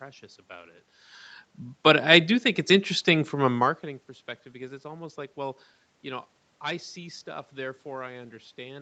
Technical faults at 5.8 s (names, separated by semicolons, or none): none